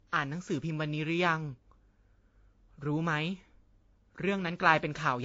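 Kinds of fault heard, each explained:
Transcoding between lossy codecs: the speech is dull, with nothing above 7.6 kHz and several kinds of artefact heard together. This likely comes from repeated re-encoding, which fits AAC, then MP3, then WMA at low bitrates, each adding its own damage.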